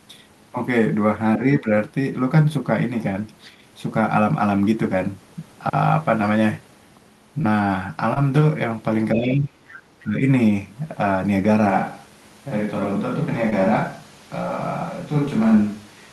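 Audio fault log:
1.59–1.66 s, 9.15–9.52 s and 10.03–10.22 s, speech suppressed in double talk: the level dips by about 15 dB, about 5 dB and about 10 dB. The likely cause is the echo canceller treating the talker as echo while the far side also spoke, so it turned everything down.
7.41–7.46 s, 8.14–8.18 s and 13.50–13.54 s, short concealed packet loss: in each spot about 20 ms of audio never arrived in time. The decoder extended the preceding sound to bridge the gap and then crossfaded back, leaving a brief smear or wobble.
10.00–10.04 s, other side's voice leaking through: a faint scrap of a second voice sits about 30 dB below the main speech. The likely cause is the loudspeaker playback reaching the microphone and the echo canceller not fully removing it.
11.70 s to the end, switch to a distant microphone: the sound abruptly turns roomy and hollow, and room noise now sits about 30 dB below the speech, though overall level holds roughly steady. 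Likely the close microphone dropped out and a farther one took over.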